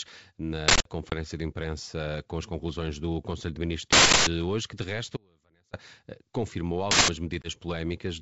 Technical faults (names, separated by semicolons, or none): uninitialised buffer; packet loss on an ADPCM call; audio dropout to a faint residue